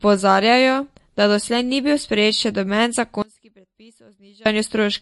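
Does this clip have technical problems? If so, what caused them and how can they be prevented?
Yes. The whole clip carries MP3 compression, likely from encoding at a low bitrate; the damage fits something around 48 kbps. Starved of bits, the encoder cut the treble outright, leaving nothing above 11.3 kHz, and dropped weak frequency lines that flicker in and out between frames. The speech therefore sounds dull and plainly watery, with swirling on sibilants and softened consonant attacks. To prevent this, encode speech at a higher bitrate or keep a lossless copy.

From 3.22 s to 4.46 s, just after "bil sprejet še noben", there is an audio dropout to a faint residue. The likely cause is a brief loss of the wanted signal upstream while the rest of the chain kept running, so for about 1.24 s the speech collapses abruptly to a faint leftover sound roughly 30 dB below its normal level. It then snaps back just as suddenly, unlike a natural pause or fade. 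To prevent this, secure cables and connections and monitor the input level during recording so that interruptions are caught and retaken.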